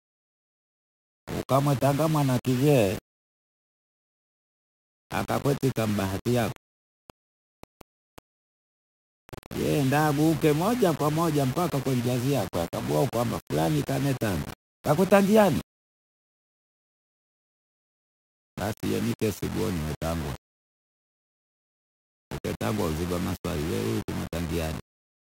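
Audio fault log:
throughout, low bit depth without dither: The speech sounds grainy and harsh. The distortion shifts with every syllable. Quiet stretches sputter or fall silent. The likely cause is rounding to very few bits with no dither, which fits 5 bits, leaving error only about 15 dB down.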